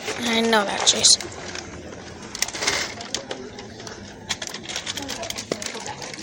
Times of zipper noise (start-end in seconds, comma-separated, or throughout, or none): none